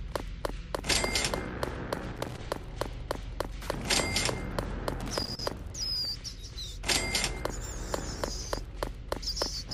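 An irregular burst of crackle and scratching cuts across the sound from 2.16 to 2.38 s, and a longer burst follows from 5.00 to 5.46 s. Both are loose connector crackle. A worn or dirty contact in the signal path is shifting, so the connection flickers open and closed many times in quick succession. Each break chops the audio, and any DC on the line turns each reconnection into a small pop.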